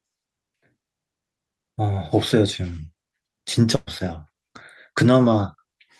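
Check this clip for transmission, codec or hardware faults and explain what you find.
One transmission fault is audible in the speech.

A burst of packet loss runs from 3.75 to 3.89 s: about 120 ms of audio never arrived, and the receiver spent roughly 113 ms stretching the last sound it had, fading it as a held buzz or hiss before the speech jumps ahead.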